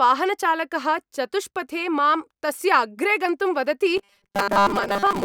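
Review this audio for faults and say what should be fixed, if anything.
From 3.97 s to the end at 5.25 s, the speech turns into a rigid, metallic buzz locked at 200 Hz: robotic sound from repeated short buffers. The likely cause is audio arriving too seldom, so the software loops the last stretch of about 5 ms while most of the real signal is skipped. Unlike mains hum, the buzz only appears in this stretch and still loosely follows the speech, and unlike a sweeping comb-filter effect its pitch stays fixed. Keep the audio delivery fed ahead of playback with a larger jitter buffer so gaps never have to be filled by looping.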